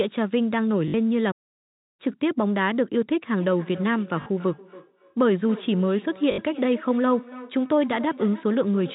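At 0.88 s, packet loss with the last packet repeated sets in. Incoming audio went missing for 60 ms, and the receiver kept replaying its most recent packet, which fits a run of 20 ms packets. The loops buzz briefly, a short robotic stutter in the speech.

From 1.31 s to 2.00 s comes a playback stall, likely caused by the player running dry of buffered data or its thread being held up. The speech cuts off mid-flow and the output is silent for about 0.67 s before picking up again.

Starting at 3.36 s and lasting to the end, there is feedback echo between two devices. A second device in the same room replays this talker's audio, and that sound leaks back into the microphone, which its own echo canceller cannot remove. Each phrase returns about a third of a second later, thin and ringing, at most about 17 dB below the direct speech, over the band-limited telephone sound of the G.711 link.

The same packet-loss stutter recurs inside the echoing section, at 4.22 s for 40 ms and at 6.32 s for 60 ms, each a brief buzzing repeat of the preceding fragment of sound.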